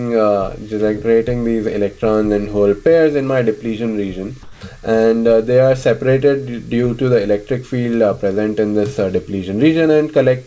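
From 4.43 to 4.61 s, comfort noise replaces the background, smoother and about 5 dB quieter, likely from discontinuous transmission filling the 180 ms gap.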